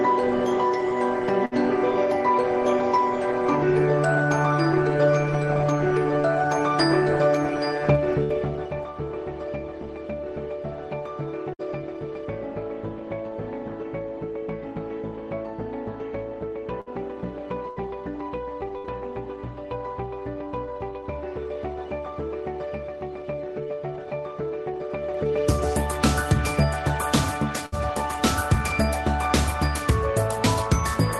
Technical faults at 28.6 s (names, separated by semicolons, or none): none